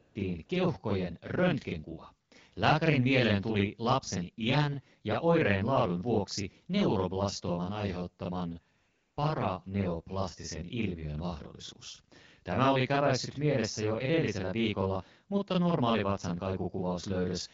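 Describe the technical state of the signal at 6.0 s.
At 6.0 s the speech carries a channel delay (doubling), present throughout the clip. One channel runs about 40 ms late and is summed to mono with the other. The late copy lands as a second, equal-level voice, giving a thickened, slapped doubling.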